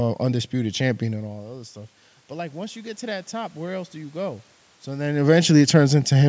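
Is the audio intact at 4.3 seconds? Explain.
No. At 4.3 seconds the speech and the background noise are swelling together, partway through an automatic gain rising that runs from 1.09 to 5.14 s. After the input dropped by about 15 dB, as the talker moved away, the gain control slowly added about 7 dB.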